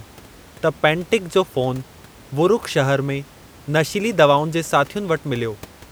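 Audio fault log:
The speech signal shows no faults, with the room's background noise sitting at about 25 dB below the speech.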